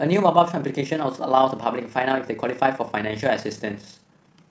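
From start to finish the speech carries overlap-add ripple. The signal was split into windowed frames and rejoined with an overlap whose gains do not sum to a constant, so the level dips and recovers once per frame, by about 6 dB, at a rate of roughly 30 per second. That regular pulsing sits on every sound and comes across as a rough tremolo, a fast flutter that chops the audio evenly throughout.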